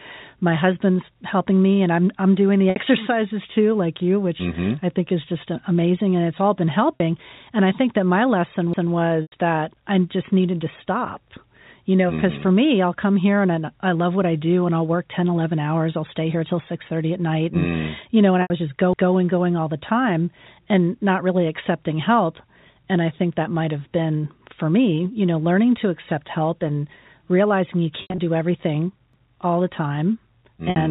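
Packet loss with pitch repetition hits at 2.70 s (60 ms), 6.96 s (40 ms), 9.22 s (100 ms, before "that I just needed"), 18.42 s (80 ms), 28.02 to 28.18 s (120 ms scattered) and 30.70 s (60 ms). The last pitch period repeats, giving a brief held buzz.

Overlapping chunks cause stutters at 8.73 s, after "think that my lesson", at 18.93 s, between "was just" and "going all the time", and at 29.13 s. Each 10 s chunk starts 200 ms early, so that slice plays twice. The telephone band cuts off at 4 kHz.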